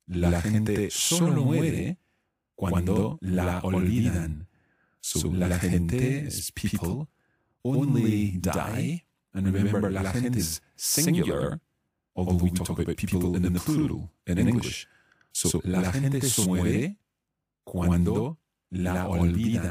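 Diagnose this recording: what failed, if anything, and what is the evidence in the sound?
Channel delay (doubling), driver or buffer stage: one channel runs about 93 ms late, fitting a 4096-sample buffer, so the mono sum carries an equal-level slap echo. The waveform shows every onset twice.

Compressed frames skipped, codec or storage stage: jumps ahead at 6.90–6.94 s, 10.38–10.42 s and 16.42–16.46 s drop roughly 100, 300 and 200 ms of speech, whole 46.4 ms frames. The spectrogram shows a break in continuity at each join.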